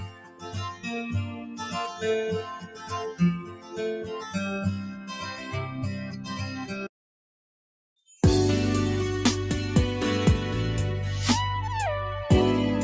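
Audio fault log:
Throughout: noise suppressor applied to music or sounds. A speech-tuned suppressor treats sustained tones and tails as noise, pumping the level across a swing of around 15 dB.
0.00–0.55, 0.71–0.86, 1.29–1.74, 2.49–2.92, 3.39–3.79, 4.01–4.35, 4.83–6.89 s: sound cut by the noise suppressor. Held or decaying passages sink by about 6 to 15 dB while sudden onsets pass through, thinning the sound.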